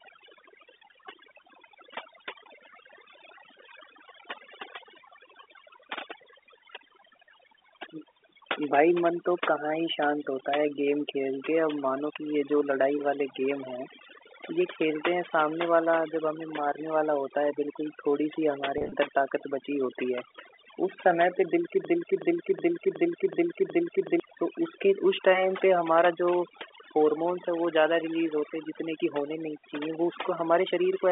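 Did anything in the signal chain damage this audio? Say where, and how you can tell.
Yes, at three stages. Throughout, the call processing applied overdone noise removal. The background sits near silence, with small twinkling specks where single frequency bands flicker on and off. The suppressor was set too hard. It cut any band that came close to its noise estimate, and the quieter parts of the speech went with them. All of this sits inside a telephone band of about 300 Hz to 3.6 kHz.

From 18.78 to 18.92 s, the network caused packet loss with pitch repetition. Over about 140 ms, roughly 100 ms of audio is missing in short scattered gaps. None is longer than 30 ms. Each gap is filled by repeating the last pitch period, so the sound briefly holds with a slight buzz. This pattern fits about ten small packets lost over that stretch.

From 21.85 to 24.20 s there is a broken-record loop. A 0.37 s fragment plays six times back to back, and it repeats exactly each time. 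The audio that belonged in those 2.35 s never arrives. The likely cause is a stall in playback or in the stream. The last buffered fragment kept being sent until fresh data came back.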